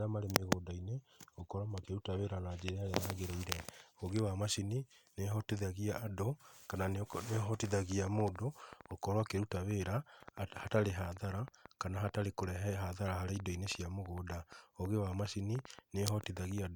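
A speech recording with a train of clicks running from 6.83 s to 16.59 s: roughly seventy similar pulses at about 6.6 per second, unevenly spaced, peaking around 5 dB above the speech and ticking through the pauses as well. The likely cause is interference from nearby equipment or a faulty connection or power supply. Unlike random crackle or isolated dropouts, these clicks share one shape and persist as a sustained series independent of the talking.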